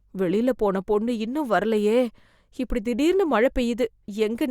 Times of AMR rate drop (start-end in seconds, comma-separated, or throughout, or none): none